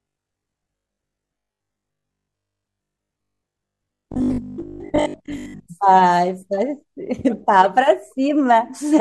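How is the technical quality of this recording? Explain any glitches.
The recording has one clear fault. From 0.02 to 5.7 s, the speech has a robotic sound from repeated short buffers. It turns into a rigid, metallic buzz pitched near 50 Hz that follows the original only roughly. The likely cause is audio arriving too seldom. Chunks of about 20 ms get replayed to fill the gaps, replacing most of the real signal. That fixed repeat rate forces the steady buzz.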